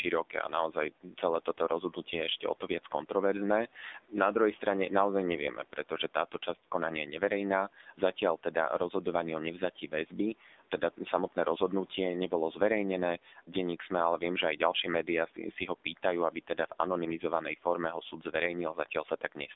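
Throughout, the AMR narrowband mobile codec makes the speech buzzy and synthetic, which points to a low bitrate around 7.4 kbps. A spectrogram shows a hard ceiling at 3.8 kHz.

Speech cut by the noise suppressor appears at 0.3–3.11 s, 5.52–6.47 s (after "druhej strane naozaj", before "konania je"), 7.21–8.94 s (after "konania je"), 9.6–11.37 s (before "rozhodnutie nebolo") and 13.24–19.49 s. In each stretch the suppressor mistakes brief parts of the speech for noise and turns them down by about 10–12 dB, so they sound swallowed. The affected parts total well under a second per stretch, about a second in the last one. On the waveform these show up as short, sudden dips in the speech envelope.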